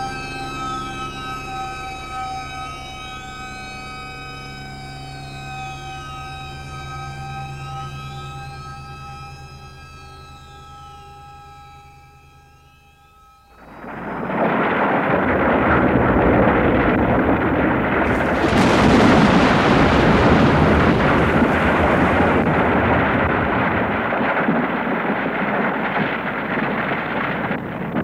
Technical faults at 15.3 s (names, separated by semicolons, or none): none